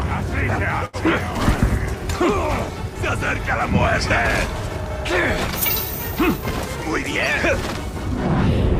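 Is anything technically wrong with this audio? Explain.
Yes. From 0.85 to 0.96 s the sound hangs for a moment: whatever was playing is held and drawn out with a slight buzz or dip, then carries on exactly where it left off, with nothing skipped. This is a short stall from a late packet. The next packet hadn't arrived when it was due, so the jitter buffer ran dry and the receiver stretched the last audio by about 78 ms to bridge the gap. Playback then resumed 78 ms later than before.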